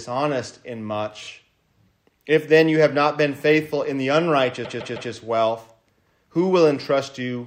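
Repeated frames stutter the audio twice. At 1.22 s a 26 ms block, consistent with a single compressed frame, plays two extra times. From 4.64 to 5.11 s a 157 ms block, consistent with about six frames, plays three extra times, adding 470 ms.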